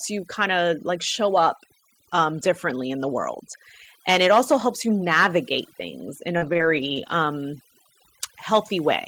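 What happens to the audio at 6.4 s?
Just after "you navigate things in", at 6.37 s, the decoder ran into short concealed packet loss lasting until 6.43 s. About 40 ms of audio never arrived in time, so the receiver filled roughly 41 ms by extending the last sound (pitch-based if voiced, shaped noise if not) before crossfading back into real signal. The result is a brief smear or wobble, and a short consonant there may drop out entirely.

Overlapping that, from 6.41 s to 7.11 s, there is a lost packet rebuilt from error correction, repeated across a run of separate losses. Each missing frame was restored from the low-bitrate redundant copy carried in the following packet (Opus in-band FEC), totalling about 360 ms of rebuilt audio within that 0.7 s stretch. There are no gaps, but those frames sound rougher and noisier.

Underneath both, the overdone noise removal present across the whole clip is still at work at 6.4 s. 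The suppressor is pulling individual frequency bands down hard wherever they sit near its noise estimate, taking quieter parts of the voice with them. That leaves a lowered background broken into twinkling specks between sounds.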